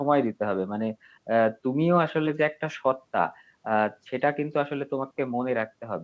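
No technical faults are audible.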